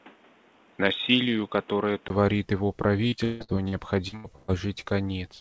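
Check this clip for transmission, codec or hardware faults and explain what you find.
Two faults are audible in this speech recording: a stretch with a much narrower band at the start, and a burst of robotic, broken-up sound later on.

From 0.0 to 2.10 s, the input was likely switched to a poorer device. The sound is dull and boxy, with nothing above 3.8 kHz, compared with the wider band up to 8 kHz carried afterwards by the G.722 call path. A different microphone or a headset's call profile passes a narrower band and adds its own hiss, here about 30 dB below the speech. The level stays about the same. On a spectrogram, energy is cut off flat at 3.8 kHz and then widens abruptly after a 20 ms silence at 2.10 s, which shows as a brief flat line in the waveform.

From 3.08 to 4.51 s there is repeated packet loss, which gives a robotic sound. Seven gaps fall close together, the longest 163 ms, and together they cover about 36% of the span. 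Each gap is filled by stretching the last received sound forward, so the speech turns choppy, with pieces missing. On a spectrogram the concealed stretches appear as smeared, repeated harmonic bands with little onset detail. The waveform shows oddly regular, looping segments where the real signal drops out.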